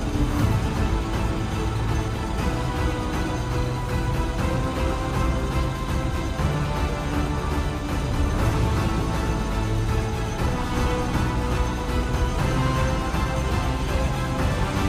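Nothing in the audio stood out as a technical problem on listening.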